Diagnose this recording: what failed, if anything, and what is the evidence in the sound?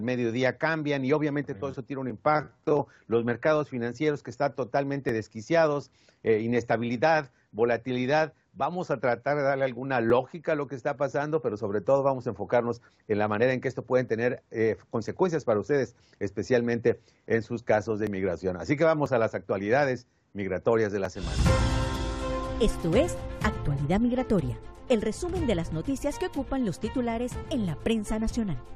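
Tiny skips break the sound at 2.10, 5.09, 10.10, 14.09, 15.08, 18.07, 19.06 and 21.05 s. Each is a sudden jump where roughly 15 to 19 ms of audio goes missing. This is an overlap between stream segments at the network or playback stage. Every event falls near a whole second, which fits 1.0 s segments whose timestamps overlap. The player trims the overlap, discarding audio that was never duplicated, so the waveform steps abruptly.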